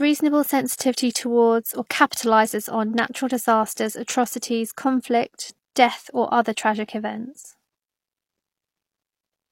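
At 0.77 to 0.79 s, just before "towards or capitalizes on", and again at 3.73 to 3.77 s after "or capitalizes on natural", pre-echo appears: codec noise spreads backward across the block, so a brief hiss of 22 and 36 ms leads the attack. Unlike reverb, it comes before the onset rather than after.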